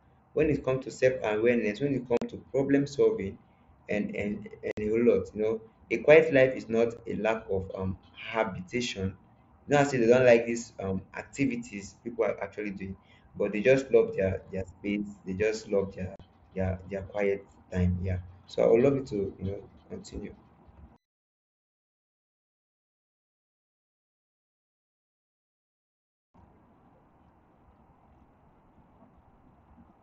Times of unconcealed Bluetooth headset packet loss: 2.17-2.22, 4.71-4.77, 6.97, 16.16-16.20

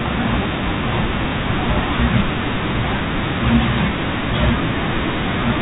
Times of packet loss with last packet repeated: 1.29-1.32

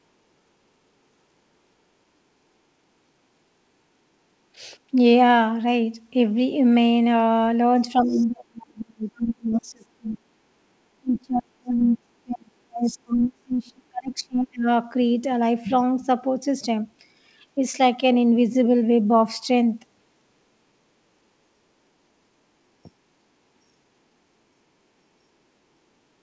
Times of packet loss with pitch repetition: none

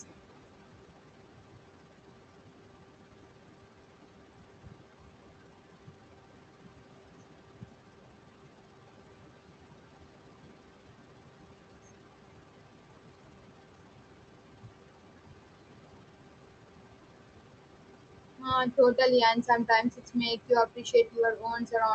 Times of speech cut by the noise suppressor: 4.39-4.82, 18.39-18.98, 19.35-21.95

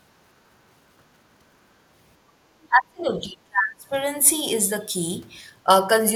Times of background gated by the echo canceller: 2.31-2.41

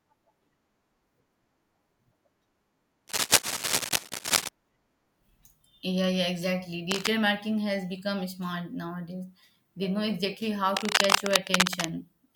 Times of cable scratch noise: 3.07-4.49, 6.91-7.08, 10.76-11.88

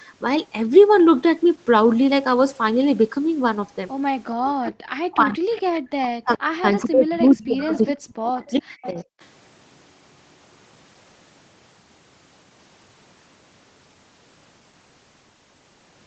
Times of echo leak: 4.67-4.72, 5.54-5.62, 7.75-7.93, 8.47-8.86, 9.20-9.25

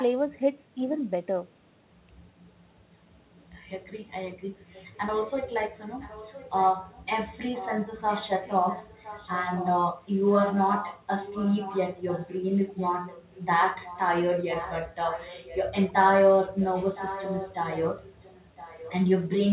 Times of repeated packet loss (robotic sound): none

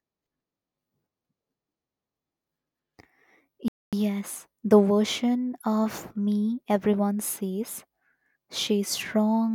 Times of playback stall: 3.68-3.93

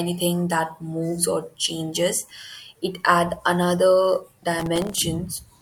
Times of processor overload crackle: 4.60-5.02

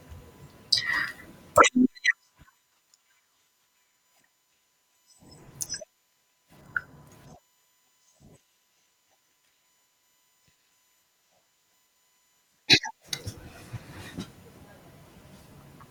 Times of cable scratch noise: none

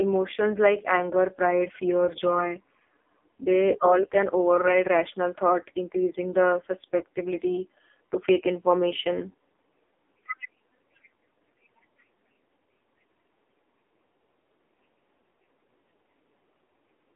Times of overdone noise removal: none

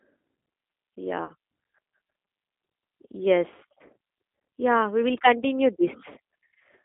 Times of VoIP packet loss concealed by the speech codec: 1.25-1.33, 5.14-5.18

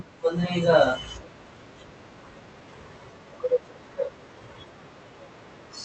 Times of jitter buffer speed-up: 2.17-4.54

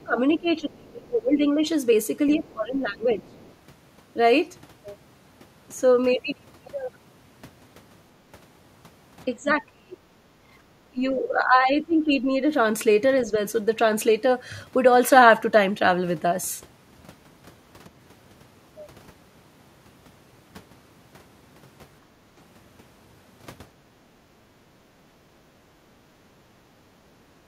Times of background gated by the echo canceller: 22.06-22.33

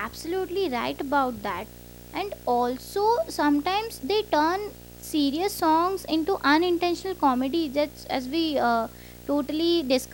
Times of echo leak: none

